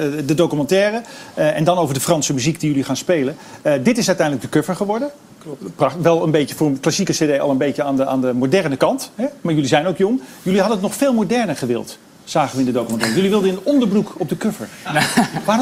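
Nothing in this audio stands out as a technical fault, so there's nothing to flag here.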